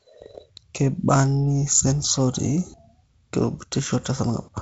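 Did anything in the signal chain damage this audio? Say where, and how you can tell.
No, nothing damaged this audio.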